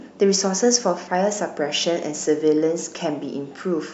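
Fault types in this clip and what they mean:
No technical faults can be heard, and the speech signal stays continuous throughout.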